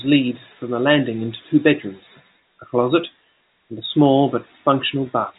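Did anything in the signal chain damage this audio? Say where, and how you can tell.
No, nothing in the chain has damaged this speech; it just carries the narrow band of G.711 telephone coding, with nothing above about 3.8 kHz, which is how that format is meant to sound.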